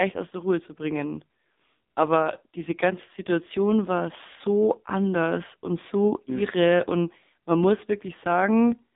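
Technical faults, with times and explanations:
Throughout: AMR narrowband mobile codec. The speech is confined to roughly 200 Hz to 3.7 kHz, and the heavy buzzy, synthetic quality fits a low rate near 5.9 kbps. Unlike a plain telephone filter, the speech is rebuilt from a vocal-tract model and sparse pulses.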